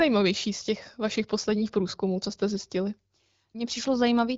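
No technical faults are audible.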